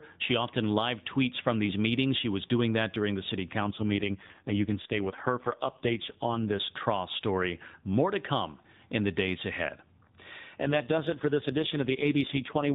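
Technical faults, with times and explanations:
3.6 to 6.6 s (just after "that during the city") and 10.6 to 12.7 s, AMR rate drop: the speech turns buzzier and more synthetic, which fits the codec falling from 12.2 to 4.75 kbps under a weak link. The band never narrows and nothing drops out, unlike packet loss.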